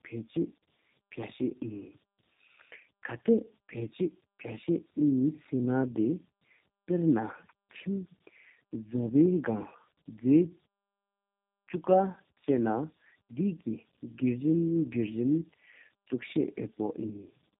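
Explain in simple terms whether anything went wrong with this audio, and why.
Something did go wrong: the speech suffers from tandem speech coding from start to finish. The call passed through three different phone-network speech coders in a row, each one squeezing the sound again after the last had already damaged it. The result is speech that sounds rough, muffled and warbly, with nothing above about 3.8 kHz. A single coder would sound cleaner. Here the damage piles up, so the roughness is heavier than one link alone explains.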